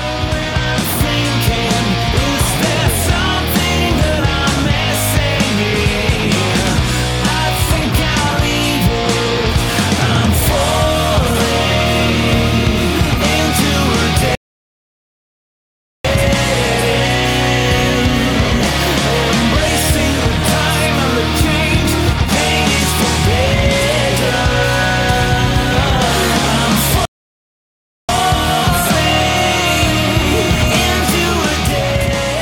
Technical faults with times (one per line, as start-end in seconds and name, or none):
14.35-16.05 rebuffering stall
27.05-28.09 rebuffering stall